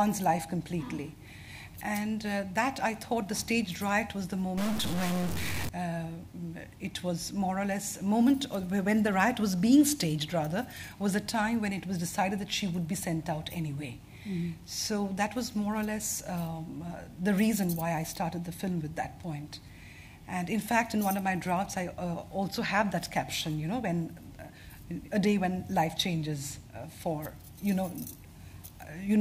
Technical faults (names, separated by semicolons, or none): stuck bit